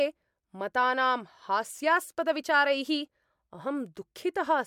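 No technical faults are audible anywhere in the recording.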